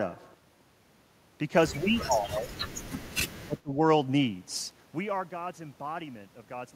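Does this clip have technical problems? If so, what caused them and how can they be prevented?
Yes: speech suppressed in double talk, dipping about 20 dB from 1.69 to 2.54 s and about 25 dB from 3.45 to 3.81 s, likely an echo canceller ducking during overlap. Use a better echo canceller or headphones.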